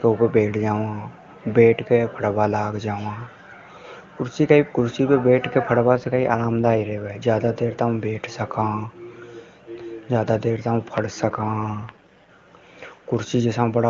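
Speech clip carried over a wideband link with two AMR rate drops. From 5.89 to 7.10 s, just before "ज्यादा देर तक बैठ", and again from 11.29 to 12.29 s, right after "ज्यादा देर तक पड़", the audio turns rough and synthetic while the bandwidth stays the same and nothing drops out. That grain fits the codec being pushed from 23.85 down to 8.85 kbit/s, freeing bits for error protection, before returning to the clean full rate.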